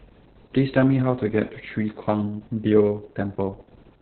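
It's a speech clip with heavy Opus voice compression all the way through. Nothing comes through above about 4.3 kHz, so it has that narrowband, telephone-style dullness, and the coarsely coded excitation makes the voice hoarse and a bit robotic. The band limit and the grit point to the SILK coder running at a very low rate, something like 6 kbps, which fits long 60 ms frames.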